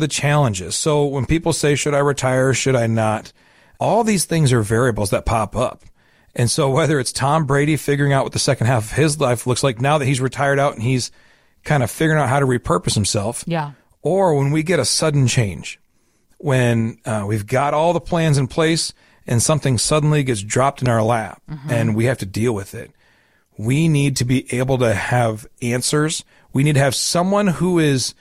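At 20.86 s, a single loud pop cuts across the speech. It lasts only until about 20.88 s. The pop is a sharp, hard click. It peaks roughly 10 dB above the speech level. The speech continues underneath without a break. The likely cause is a sudden voltage step or spike entering the signal path, from a plug, a switch, static discharge or a driver glitch.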